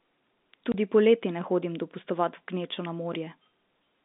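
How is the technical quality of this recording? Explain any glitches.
Two brief glitches stand out on a telephone-band speech recording, whose G.711 telephone coding keeps the sound within roughly 200 Hz to 3.7 kHz and adds at most faint damage.

At 0.72 to 0.74 s, just before "poleti ne hodim dopustovat", there is packet loss filled with silence. A 20 ms slice of audio never arrived, which fits one lost 20 ms packet, and the receiver played silence in its place. You hear a short, hard-edged dropout. What sets it apart from a reordering fault is the true hole: sound is missing, not shuffled.

At 3.12 to 3.15 s, right after "gnečo na", there are chunks out of order. A piece of audio about 12 ms long arrived late and played one chunk after its proper place, so nothing is missing, but the sequence is wrong and three hard joins appear. It comes across as a brief garbled jumble with no silent gap, which distinguishes it from the dropout earlier.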